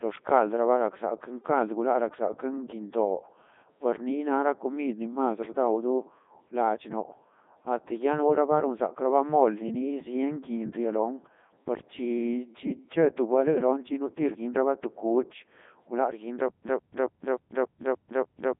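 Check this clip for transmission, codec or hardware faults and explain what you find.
The whole clip carries a Codec 2 vocoder fault, with heavy damage that fits its 3.2 kbit/s mode. The decoder rebuilds speech from sine waves using only pitch, voicing and envelope, so it sounds robotic and buzzy. A spectrogram shows neat harmonic stripes confined to roughly 200 Hz to 3.6 kHz and nothing above 3.8 kHz, and the waveform bears no resemblance to the original shape.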